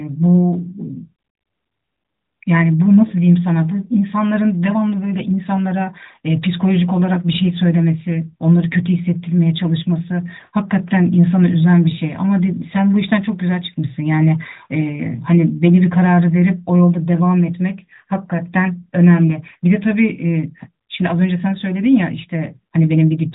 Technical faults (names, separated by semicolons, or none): none